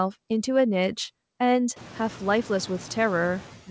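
Noise suppressor artifacts run through the whole clip. The suppressor cuts bands it treats as steady noise by about 9 dB, frame by frame, so the background dips in pauses and returns under speech. The effect is more exposed from roughly 2 s, when the room noise rises by about 22 dB to sit about 19 dB below the speech. The band stops at 8 kHz, which fits a wideband call codec such as G.722.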